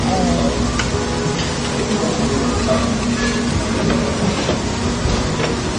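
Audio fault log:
Throughout, transcoding between lossy codecs: nothing is heard above 9.6 kHz, and the sound carries the artefacts of several codecs heard together, which no single encoder would leave. The likely cause is a chain of low-rate encodes, consistent with MP3, then Vorbis, then Opus. Each later stage spent its small budget re-coding the previous stage's artefacts while adding its own, and the lowest cut-off in the chain was the one that stayed.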